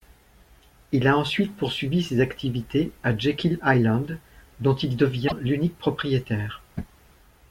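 Speech recording with one fault: damaged data in a compressed stream at 5.25 to 5.32 s, where corrupted frames make the decoder lose sync and emit a brief glitch.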